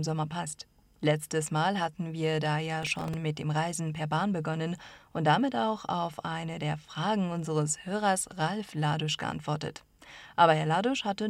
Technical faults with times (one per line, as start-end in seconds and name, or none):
2.83-3.14 processor overload crackle